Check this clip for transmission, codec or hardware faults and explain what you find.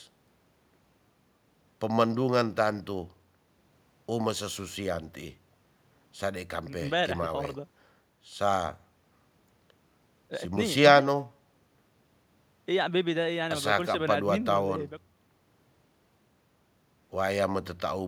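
Nothing faulty can be heard anywhere in this speech.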